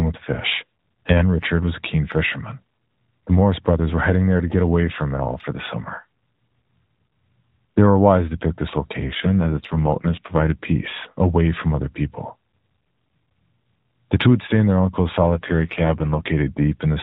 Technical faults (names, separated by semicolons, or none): AMR rate drop